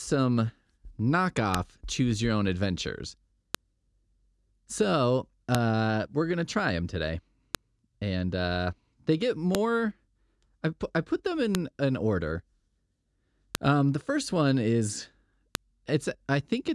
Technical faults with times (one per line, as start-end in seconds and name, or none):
1.54 file header played as audio
3.55 file header played as audio
5.55 file header played as audio
7.55 file header played as audio
9.55 file header played as audio
11.55 file header played as audio
13.55 file header played as audio
15.55 file header played as audio